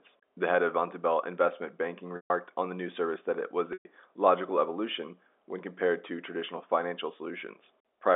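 At 2.16 s, just before "on the new service", the speech breaks for about 140 ms, and again at 3.73 s, between "service that it was" and "logical evolution when compared", for about 120 ms. Both are packet loss with pitch repetition: the receiver loops the last pitch period to cover the gap, so a brief held buzz fades out over roughly 50 ms into silence before the speech returns through a short cross-fade, all within the narrow telephone band of the G.711 line.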